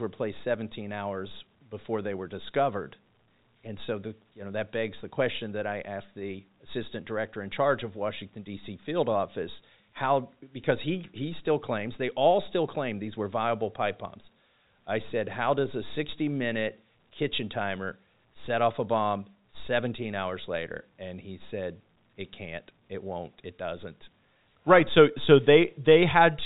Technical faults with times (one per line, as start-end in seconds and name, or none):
none